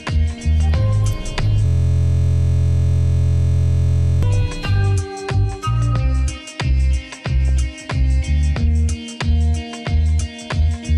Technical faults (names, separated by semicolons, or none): system hang loop; DAB burbling